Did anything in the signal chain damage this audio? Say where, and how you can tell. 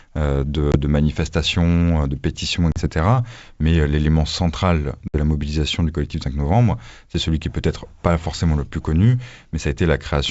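Yes, at the network stage: packet loss on an ADPCM call. Silent holes appear at 0.72–0.77 s just before "de manifestation de pétition", at 2.72–2.87 s right after it, and at 5.08–5.15 s between "l'élément central" and "la mobilisation du collectif". These fit roughly one, two and three lost packets. A plain buffer dropout would resume cleanly. Here the sound returns slightly distorted, then settles within tens of milliseconds. That shows the decoder's predictor and step size drifting out of step with the sender's.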